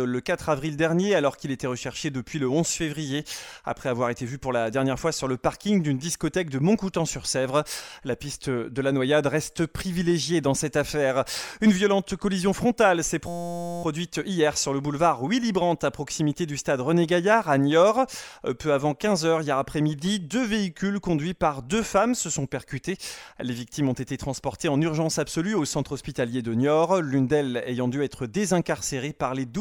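At 13.28 s a system hang loop begins and lasts until 13.83 s. The playback process stalled while the hardware kept replaying one 5.8 ms stretch of its ring buffer, which fits a 256-sample buffer. The result is a steady buzz at 172 Hz.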